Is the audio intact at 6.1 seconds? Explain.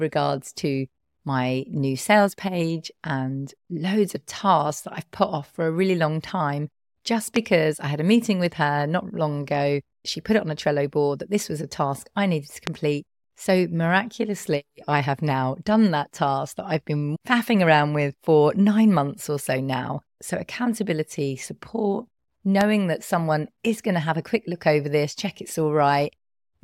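Yes, the speech at 6.1 seconds plays through intact, with no audible fault at that moment.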